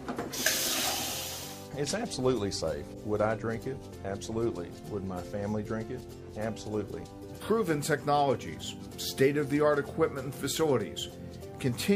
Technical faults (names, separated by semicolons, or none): corrupt frame decoded